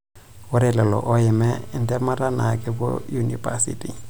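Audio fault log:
1.33–4.05 s GSM phone buzz: rectified 217 Hz radio bursts give a hard rasp about 27 dB below the speech, gating on and off. A spectrogram shows interrupted harmonic lines every 217 Hz.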